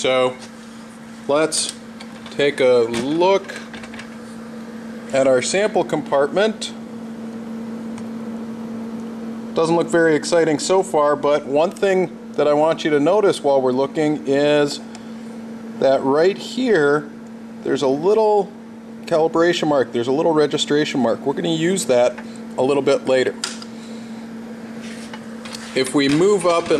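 No technical faults are audible.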